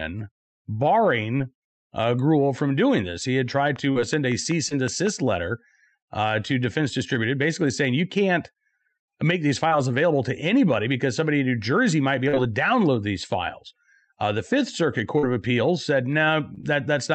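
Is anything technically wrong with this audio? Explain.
Yes, two kinds of fault in this speech. First, short concealed packet loss at 1.37, 3.92, 4.69, 9.68, 12.29, 15.19 and 16.55 s: 20 to 40 ms of audio arrived too late, so the receiver extended the preceding sound and blended back, giving brief smears or wobbles.

Second, a train of clicks from 3.76 to 5.08 s: around seven evenly spaced pops at about 5.3 per second, peaking roughly 10 dB above the speech and audible over pauses too. That's likely electrical interference or a faulty connection or power supply. The call path's Opus coding at 48 kbps, with its top end stopping near 8 kHz, is working normally.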